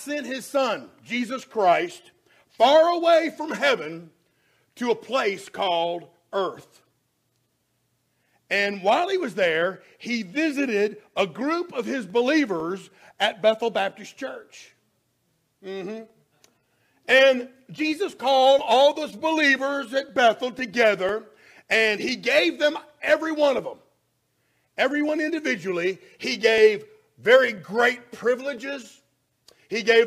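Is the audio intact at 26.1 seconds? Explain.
No, 26.1 seconds falls inside a run of periodic USB or driver dropouts lasting from about 12.10 s to 29.58 s. Something on the system is blocking the USB bus or the audio driver every 0.5 s, and each time roughly half a millisecond of audio is skipped outright rather than filled with silence. Around 26.1 s you hear it as a steady, evenly spaced tick or pop, and it only shows up while there's signal playing.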